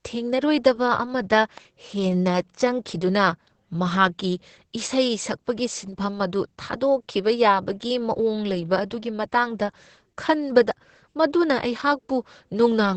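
Right from the start the speech is squeezed through Opus voice compression in its SILK mode. The band stops at about 8.8 kHz, and the coarse coding of the excitation makes it muffled, hoarse and a bit robotic, which fits a stream down around 10 kbps.

Between 1.36 and 1.60 s there's a loud pop, actually two in quick succession, jumping a few dB above the speech while it carries on underneath. That's likely a voltage step or spike from a plug, switch or static discharge.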